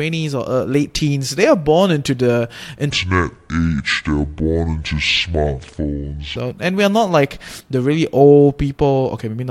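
Speech, and there's a section at the wrong speed running from 2.90 to 6.36 s, right after "are born into the" and up to "and we are not". In that stretch everything drops to about 0.63 times normal speed, so the sound turns slow and deep, roughly seven semitones lower, with pitch and tempo sagging together. That's likely a playback or edit step running that segment against the wrong clock, then snapping back to proper speed.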